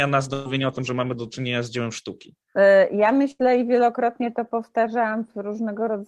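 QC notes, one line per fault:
0.33–0.47 s, burst of packet loss: about 120 ms of packets never arrived, so the receiver stretched the last sound for 116 ms, fading it, before resuming at "o tym że mamy".
3.31–3.41 s, burst of packet loss: about 80 ms of packets went missing, and 83 ms of extended, decaying sound covers the gap until "i wielokrotnie to" resumes.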